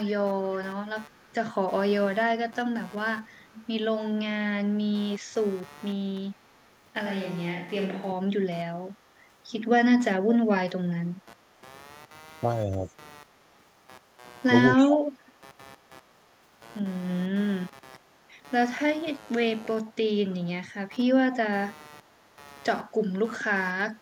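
A speech recording carries computer activity noise from start to finish: a buzzing pulse train repeating at around 150 times per second, sitting roughly 25 dB below the speech, that rises and falls with the machine's workload rather than with the talker, consistent with processor, graphics or mouse load currents modulating the audio circuit's shared ground. An echo leak, a delayed copy of the speech trailing the original by 288 ms, runs from 0.1 to 6.71 s, 12.92 to 16.19 s and 20.3 s to the end, with the echo roughly 20 to 25 dB below the direct speech in those stretches, plus short faint scraps around 40 dB down at 11.06 to 11.26 s and 18.26 to 18.33 s. The fixed 288 ms lag points to a far-end loudspeaker being picked up by its microphone and not fully removed by that side's echo canceller before being sent back. Between 7.06 and 8.12 s the speech suddenly turns roomy and hollow, with thinner bass and room noise appearing about 35 dB below the speech, then snaps back. 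The level barely changes across the swap, but the abrupt shift in tone and space marks a switch to a distant microphone, likely a camera or similar pickup standing in for the close microphone. Speech suppressed in double talk appears as brief dips where the talker is pushed down while the other side is active: at 10.08 to 10.47 s the level falls by as much as about 35 dB, at 12.27 to 12.89 s by around 20 dB, and at 14.51 to 15.35 s by about 35 dB again, each episode lasting roughly 0.4 to 0.5 seconds. The pattern matches an echo canceller that could not separate local speech from loudspeaker echo during overlapping talk and attenuated both.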